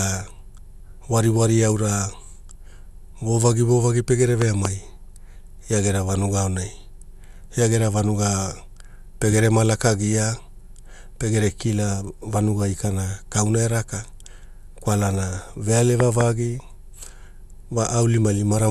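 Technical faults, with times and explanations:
Throughout, generation loss: the speech was likely re-encoded with MP2 about seven times at 128 kbit/s, stacking quantisation noise into a swirly, hollow sound with blurred attacks and nothing above 12.6 kHz.
4.42 to 4.67 s, loud pop: just after "vovagi vovagi pegere", a voltage transient, likely from a switch or static, adds two sharp pops, roughly 15 dB above the speech, which continues underneath.
16.00 to 16.23 s, loud pop: another double pop, around 20 dB above the speech, likely from a similar sudden electrical step, heard as two sharp thumps over the ongoing speech.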